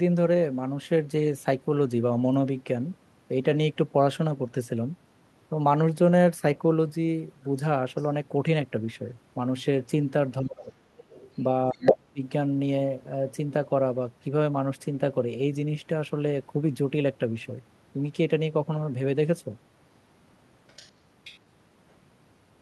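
A speech recording with residual echo and double-talk problems. The other side's voice leaks through at 7.96–8.07 s, 10.97–11.44 s, 11.72–11.93 s, 20.68–20.92 s and 21.24–21.39 s. It is mostly a faint background voice, about 20 to 35 dB under the talker, but at 11.72 s it briefly rises to about 5 dB above the talker's own level. The likely cause is a loudspeaker on the talker's device whose output reaches the microphone and is not fully subtracted by the echo canceller. Speech is also suppressed in double talk at 10.41–10.75 s, where the talker's level dips by about 25 dB for around 300 ms, and at 11.72–12.22 s, where it drops by about 35 dB over roughly 400 ms, overlapping the loudest leak. These dips likely come from the echo canceller attenuating everything while both sides were active, because it could not tell the near talker from the echo.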